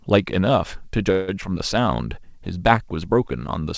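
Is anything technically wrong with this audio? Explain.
Yes. From 1.12 to 1.30 s the speech stretches into a fading buzz or hiss before resuming intact, likely a call audio freeze where delayed packets emptied the jitter buffer. At 1.42 to 1.44 s a brief smear marks short concealed packet loss: about 40 ms never arrived, was patched by extending the previous sound, and playback skipped ahead. Nothing above 8 kHz comes through, which fits the G.722 call path.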